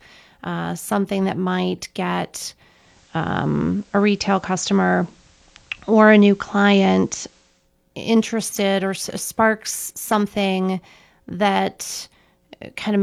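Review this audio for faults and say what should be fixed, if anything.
From 2.64 s to 7.72 s the speech passes through digital radio blending to analogue: the receiver lost its digital stream and cross-faded over about 358 ms to the station's FM broadcast, then back. On a spectrogram a faint hiss floor fills the gaps during that stretch; the waveform steps by about 4 dB at each blend. Fix it by improving digital reception or disabling blend-to-analogue on the receiver.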